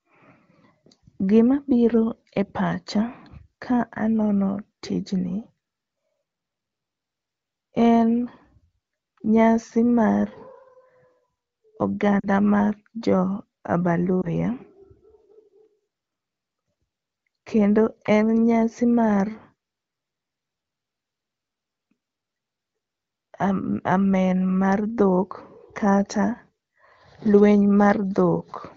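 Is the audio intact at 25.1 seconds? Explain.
Yes, the audio is intact at 25.1 seconds, with no fault at that moment.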